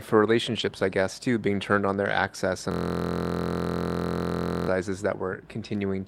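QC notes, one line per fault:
0.59 s to 0.61 s, lost packet rebuilt from error correction: a single 20 ms stretch just before "I guess too being" sounds briefly rougher and grainier, with no gap. One packet went missing and the decoder played the low-bitrate copy carried in the next packet, which holds less detail. On a waveform the level stays continuous; on a spectrogram it shows as a thin vertical band with smeared, noisier texture.
2.71 s to 4.68 s, system hang loop: right after "on their access and", a 23.22 ms slice of audio repeats exactly, about 85 times, which fits a 1024-sample ring buffer that kept cycling while the system froze. Because the slice is so short, it merges into a steady buzz at 43.1 Hz rather than a stutter. On the waveform the same segment repeats identically. On the spectrogram there are evenly spaced vertical stripes and a harmonic comb at 43 Hz spacing.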